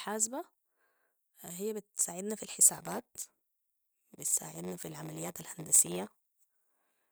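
From 2.73 s, right after "هي بتساعدنا في", there's a block size mismatch (padded): each block arriving is short of what the next stage reads, which fits a 512-sample read, so zeros fill the gap. You get a 93.8 Hz buzz to the end, with speech slowed to 0.938× and its timbre intact.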